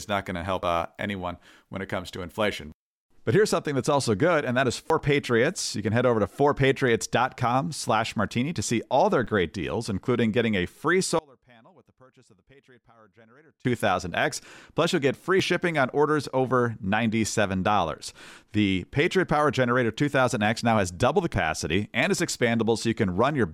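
At 0.63–0.82 s and again at 4.90–5.18 s the speech jumps forward, losing about a tenth of a second each time: compressed frames skipped, so whole frames never reached playback. At 9.24–9.27 s a brief error peaking at about -31 dBFS points to a corrupt FLAC frame, where flipped bits derailed the decoder's prediction until the next intact frame. From 11.19 to 13.65 s the speech collapses to a faint residue about 31 dB down, likely one channel inverted, so the centred content cancels in the mono sum. At 21.34–21.53 s another skip of about a tenth of a second produces the same jump.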